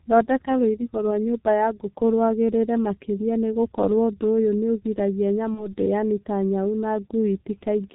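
Speech, coded throughout with the G.723.1 codec: nothing above 4 kHz survives, and the low rate, which fits roughly 6 kbit/s, leaves the voice muffled and hoarse with smeared consonants. From 5.54 to 5.74 s, VoIP packet loss concealed by the speech codec produces a brief stretched, fading sound, consistent with one lost 30 ms frame, and the voice recovers only gradually afterwards.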